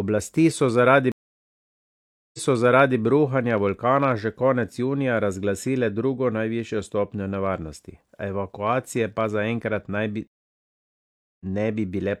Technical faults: stream reconnect

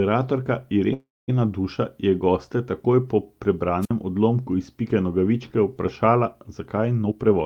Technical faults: call audio freeze; wireless microphone squelch dropout; jitter buffer speed-up

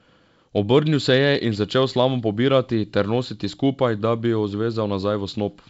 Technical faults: none

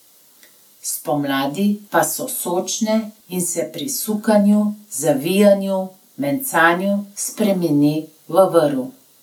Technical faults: none

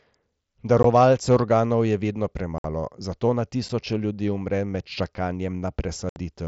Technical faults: unconcealed Bluetooth headset packet loss

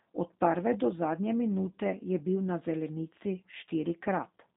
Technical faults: G.729 codec

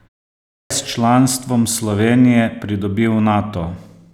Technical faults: clipped start after a pause

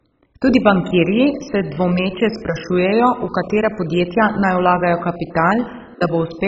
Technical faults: MP2 compression

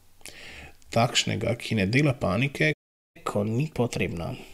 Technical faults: playback stall; catch-up at higher speed

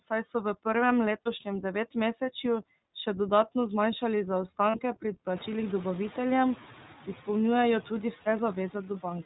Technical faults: noise suppressor artifacts; iLBC codec; lost iLBC frames

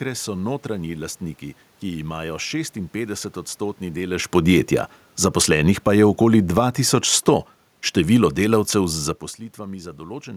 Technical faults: automatic gain falling

